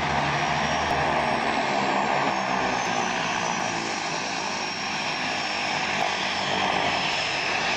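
Whole compressed frames went missing or were rejected as damaged by the decoder, so playback jumps straight past them. This compressed frames skipped fault occurs at 0.91, 2.30, 2.86, 3.60, 6.02 and 7.13 s. Each gap is a multiple of a frame length of about 93 ms. Most gaps are around half a second, one near 2.30 s is closer to 0.7 s, and the one at 6.02 s is nearer 0.2 s. At each of these points the audio jumps abruptly ahead by the length of the missing frames.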